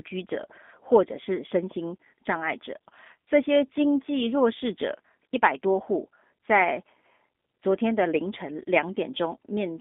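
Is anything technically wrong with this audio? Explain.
Yes. Throughout, the speech has passed through a G.729 codec, which rebuilds it from a vocal tract filter, a pitch predictor and a few coded pulses per frame, a process consistent with 8 kbit/s. The band runs only from about 200 Hz to 3.6 kHz, and the speech sounds plainly rough and synthetic.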